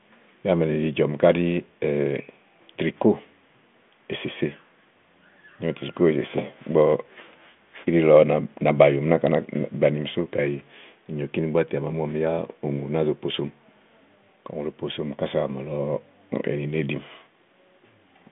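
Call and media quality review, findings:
No faults found; the speech sits on a 40 kbit/s G.726 telephone path with a 150 Hz to 3.5 kHz line band and nothing above 3.8 kHz.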